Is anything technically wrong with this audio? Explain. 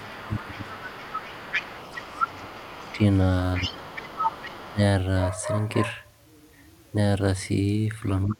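Yes. The speech shows two faults typical of echo cancellation on a call.

Speech suppressed in double talk occurs at 0.0–0.92 s, 1.96–3.01 s, 3.58–3.92 s, 4.71–4.81 s and 8.27–8.40 s. The talker's level dips, at worst by about 35 dB near the end. This is likely the canceller ducking everything while both sides speak at once.

The other side's voice leaking through is heard at 0.0–2.95 s, 3.56–4.74 s and 8.29–8.33 s. A second voice sits roughly 10 to 20 dB below the talker. It is likely loudspeaker playback that the echo canceller failed to fully remove from the microphone.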